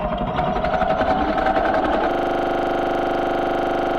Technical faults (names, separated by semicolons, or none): system hang loop